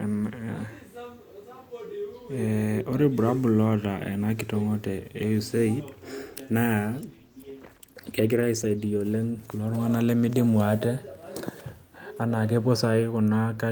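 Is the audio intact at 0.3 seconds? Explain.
Yes, at 0.3 seconds the speech plays through intact, with no audible dropout, click, distortion or other fault at that moment.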